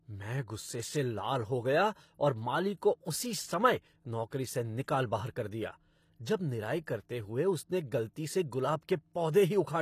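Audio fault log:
throughout, HE-AAC compression: The speech was likely squeezed through HE-AAC at a very low bitrate, with damage that fits roughly 24 kbps. The encoder spends its bits only on the lower spectrum and invents the treble by copying those bands upward under a coarse envelope, with nothing at all above about 14.9 kHz. The synthetic top end doesn't match the real harmonics, so sibilants come out plainly gritty, metallic and lispy.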